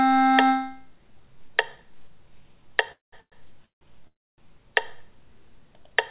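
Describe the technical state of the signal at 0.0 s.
At 0.0 s the signal is intact, with no fault present; it has passed through a WebRTC call path, and the lack of any content above 4 kHz fits a narrowband G.711 mu-law telephone codec at 64 kbps.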